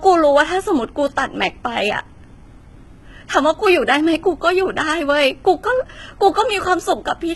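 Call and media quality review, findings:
HE-AAC compression, throughout the speech. Heavy damage: gritty, metallic sibilants; nothing above 11.8 kHz. Likely an HE-AAC encoder at a very low bitrate, around 16 kbps. Treble is rebuilt from copied lower bands, so harmonics misalign across the crossover.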